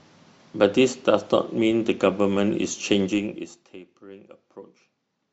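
Speech with zipper noise from 3.04 to 3.79 s, where the level drops by roughly 25 dB in unsmoothed 1 dB steps at around 40 per second. Each step lands as a small click, giving an audible zipping that rides on the speech throughout the fade.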